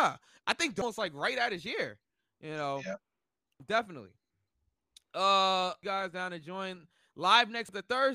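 Damaged data in a compressed stream shows up at 0.82 s, between "I think" and "like right at his", and again at 3.60, 5.83 and 7.69 s. At each point a stretch of the encoded speech stream is corrupted, so the decoder misreads the affected frame, loses sync and hunts for the next valid frame header. Each event is heard as a single instantaneous chirp, squawk, click or short hole breaking into the speech.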